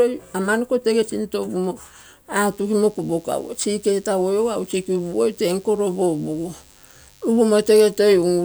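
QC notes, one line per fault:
2.51 s to end: DECT cordless phone buzz. A thin, steady buzz enters under the speech and lasts to the end. A nearby DECT transmitter sends a radio burst every 10 ms. The audio circuit rectifies these, giving 100 Hz with many harmonics. It stays faint, well below the speech.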